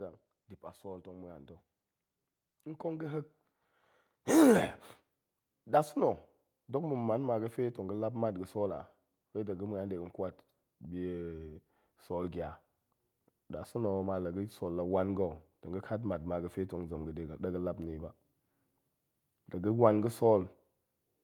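Automatic gain rising runs from 0.82 s, just after "dip a", to 6.8 s, before "ma̱ man ma fe". The gain control judged the input too quiet and lifted its gain by about 9 dB over those six seconds, so voice and background swell together.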